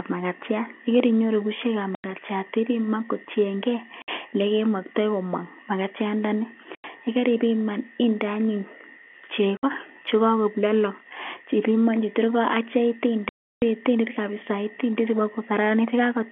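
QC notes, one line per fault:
1.95–2.04, 4.02–4.08, 6.75–6.84, 9.57–9.63 and 13.29–13.62 s, packet loss filled with silence: dropouts of 90, 60, 90, 60 and 330 ms, all multiples of 30 ms, which fits 30 ms packets. Each shows as a flat gap in the waveform and a blank vertical stripe on the spectrogram, with hard edges.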